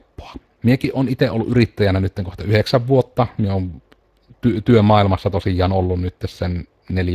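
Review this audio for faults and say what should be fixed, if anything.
Speex codec damage runs throughout: a plainly audible hoarse, noisy grain from CELP's starved excitation, consistent with about 22 kbps, unlike the swirly warble of MP3-style codecs. Nothing is present above 15.3 kHz. Encode with a modern codec such as Opus at a higher bitrate, or capture the audio before it passes through Speex.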